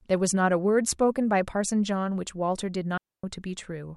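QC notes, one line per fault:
2.97–3.24 s, digital wireless dropout: the wireless link lost too much data and the receiver muted itself, so the speech drops into a clean hole of near silence lasting about 260 ms. The mute fades in and out very quickly, with no noise burst on either side.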